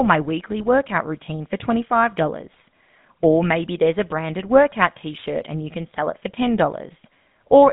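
GSM full-rate codec damage runs through the whole speech clip. The voice sits in a narrow band from about 150 Hz to 3.7 kHz and carries a plainly audible buzzy, gravelly roughness, which fits a 13 kbps coder that rebuilds the vocal tract from a filter driven by sparse, regularly spaced pulses. GSM bit errors hit from 2.54 to 2.62 s as a brief burst of squawk and gargle. Corrupted filter, pitch and gain values across a handful of consecutive frames distort the spectrum and jolt the level before the decoder recovers.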